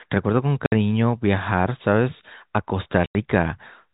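Speech clip with two spots of packet loss filled with silence, at 0.66 to 0.72 s and 3.06 to 3.15 s. Dead 60 and 90 ms holes with hard edges suggest 30 ms packets, over telephone-band G.711 audio.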